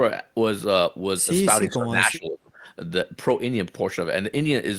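From 1.63 to 2.66 s the speech sinks sharply, down by something like 20 dB at its deepest, for roughly a second. That's speech suppressed in double talk: the echo canceller most likely mistook overlapping talk for loudspeaker echo and turned the talker down along with it.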